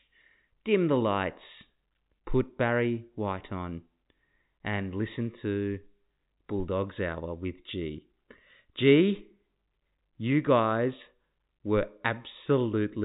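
No faults found: the speech is carried over G.711 telephone coding, so nothing sits above about 3.8 kHz, which is normal for that path.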